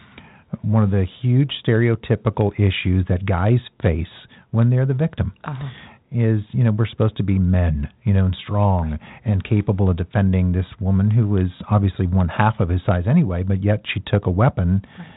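The clip is speech, and nothing is technically wrong with it.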